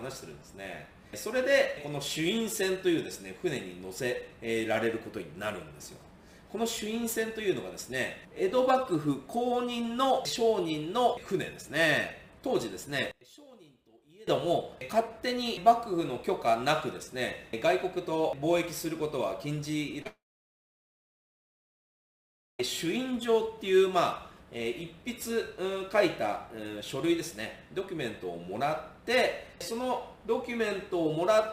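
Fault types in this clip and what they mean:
One channel inverted: From 13.11 to 14.27 s the audio drops by about 25 dB, leaving only a faint residue. This is likely one stereo channel flipped in polarity. When the two channels are summed to mono, everything they share cancels, and only the small difference between them survives. It lasts a little over a second before the full sound returns.
Short concealed packet loss: At 20.02 to 20.06 s there is a brief smear lasting about 30 ms. A few hundredths of a second of audio failed to arrive in time, and the receiver patched roughly 27 ms of that gap by extending the last sound it had decoded. It then crossfaded into the real signal, producing a momentary wobble rather than a clean cut.
Long network dropout: From 20.07 to 22.60 s about 2.5 s of audio goes missing, immediately after the short glitch before it. The receiver briefly carries the last sound forward as a fading buzz or hiss. 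After that, roughly 2.4 s is effectively silent. This is likely a stall in the network feed, and when the audio resumes, the missing stretch is simply gone rather than delayed.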